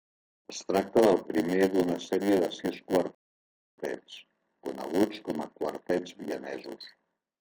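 Throughout the clip, a block size mismatch (padded) means one stage hands over blocks about 8% shorter than the next stage reads, and the shortfall is filled with zeros. That puts a tiny gap in every block, heard as a 100 Hz buzz, and the speech runs slower at 0.919 times normal speed with its pitch essentially unchanged.

At 3.15 s, just after "d'una sèrie de sis", a rebuffering stall occurs: the player runs out of downloaded audio and waits for more. The sound drops to silence until 3.78 s, then resumes exactly where it stopped, adding about 0.63 s without losing anything.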